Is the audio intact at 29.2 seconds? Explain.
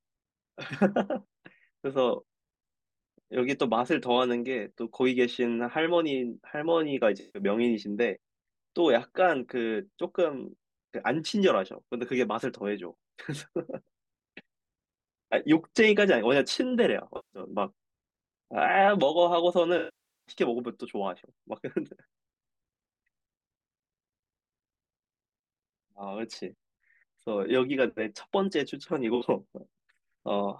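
No. Around 29.2 seconds there is AAC frame loss with concealment, from 29.15 to 29.25 s. Roughly 64 ms of coded data, consistent with three frames, went missing, and the decoder rebuilt it from the last good spectrum, leaving a brief smeared, noisy, phasey patch.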